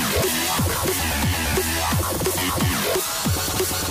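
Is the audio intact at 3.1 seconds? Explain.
No. At 3.11 s there is an abrupt jump in the sound, with no gap of silence, as if roughly 50 ms had been skipped. This is likely a dropped buffer (overrun): the program failed to read its samples before the hardware overwrote them, so the sections on either side were joined directly. On a waveform it appears as a sudden discontinuity in shape and level. On a spectrogram it appears as a thin vertical broadband line where the patterns fail to line up.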